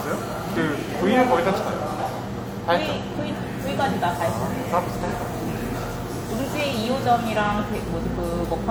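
Brief smeared, phasey patches at 5.05 s and 7.43 s, each about 43 ms: AAC frame loss with concealment, the decoder re-synthesising a single lost frame from the previous spectrum.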